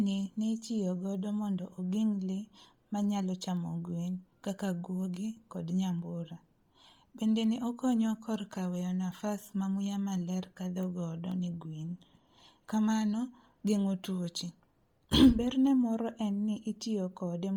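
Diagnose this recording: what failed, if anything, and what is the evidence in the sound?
Codec stage: the speech has a grainy, breathy top end all the way through, likely Bluetooth LC3 compression starving upper bands and noise-filling them, which fits roughly 32 kbps.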